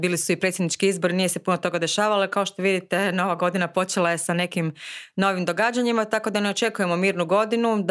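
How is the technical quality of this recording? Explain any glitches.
No glitches can be heard anywhere in the recording. Nothing breaks up, drops out or shifts in level at any point.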